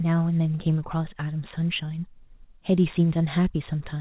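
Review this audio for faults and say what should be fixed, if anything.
Nothing here needs fixing: the speech carries no faults, and its content stops at 4 kHz, as expected of a narrowband call path, which fits a G.711 telephone codec running at 64 kbps.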